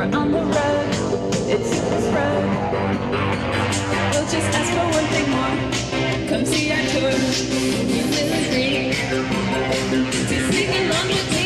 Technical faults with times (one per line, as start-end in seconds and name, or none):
0.00-11.46 mains hum